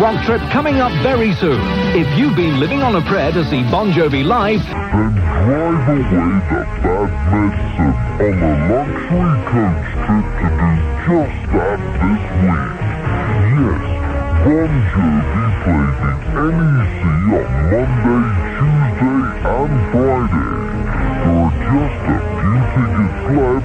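From 4.73 s onward, a section at the wrong speed plays at 0.544x, likely from a clock mismatch. Pitch drops about ten semitones. Sound turns slow and deep.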